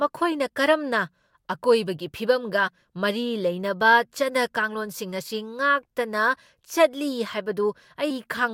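At 2.67 s the speech jumps ahead by about one frame of compressed audio, and at 8.10 s by roughly four frames, around a tenth of a second. These are compressed frames skipped.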